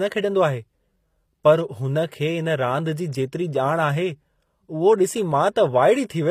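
Throughout the speech, s sounds turn gritty and metallic, with nothing above 15.5 kHz. This is likely HE-AAC compression, rebuilding treble by copying lower bands upward.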